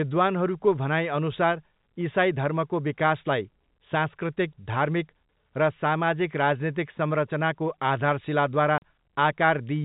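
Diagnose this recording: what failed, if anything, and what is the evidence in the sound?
Packet loss filled with silence at 8.78 to 8.82 s, a network-stage failure. The speech drops out completely for 40 ms, with abrupt edges rather than fading. The receiver got no data for that stretch and played silence in its place. The hole's length fits two consecutive 20 ms packets going missing. The G.711 telephone coding carrying the call shows only its expected narrow band.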